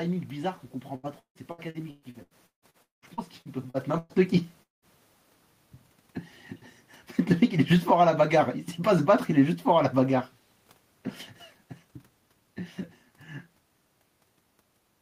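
From 0.95 to 4.12 s there is repeated packet loss with a robotic sound: fourteen gaps, the longest 196 ms, with about 38% of that stretch concealed by stretching the last sound. The result is choppy and robotic. A spectrogram shows smeared, repeated harmonic blocks, and the waveform shows flattened, repetitive segments. The change in level around 3.5 s comes from the talker moving and is separate from this loss.

At 4.63 to 4.85 s the audio is interrupted for about 0.2 s. A short, fading buzz of continued sound is followed by silence, and speech then resumes without the missing part. The likely cause is a long network dropout. It appears as a brief smeared patch, then an empty band across the spectrogram and a flat waveform.

From 7.19 to 8.10 s the automatic gain falls by about 7 dB. The control judged the input too loud, or its background noise too strong, and pulled its gain down steadily, so the speech and the room noise sink together. 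In the waveform the envelope tapers down, and the spectrogram dims evenly across all frequencies.

Overlapping this, from 8.04 to 8.60 s, the automatic gain rises by about 4 dB after the input became too quiet. Speech and background swell back up together. The waveform envelope widens, and the spectrogram brightens uniformly, noise floor included.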